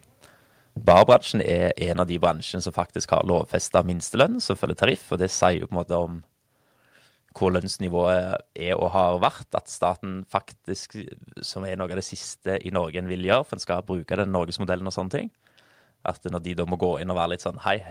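From 0.87 to 1.14 s the speech breaks into a harsh, crackling edge. This is microphone overload. The loudest peaks are flattened at the top, around one in twenty samples. The signal seems to push about 4 dB past the converter's ceiling. The likely cause is an input volume set too high for this talker. The squared-off peaks add gritty distortion that sits on top of the voice.

At 1.14 s, right after that distorted stretch, the level drops in a single step. The microphone volume stepped down by about 2 dB. Voice and background fall together, which points to a gain change before the audio reaches any processing. The likely cause is the call software reacting to the clipping and lowering the device's input level. The drop is small but abrupt.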